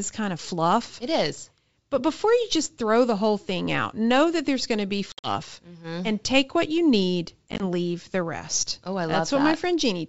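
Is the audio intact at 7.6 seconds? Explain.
No. Packet loss on an ADPCM call hits 7.52 to 7.61 s, between "take what you need" and "leave the rest": about 50 ms of hard-edged silent gaps, none longer than 20 ms. The decoder's predictor and step size lose sync, so speech resumes slightly distorted.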